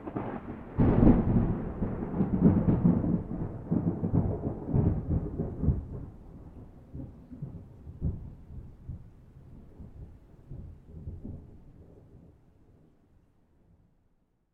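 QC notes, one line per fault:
No technical faults are audible in the signal at any point.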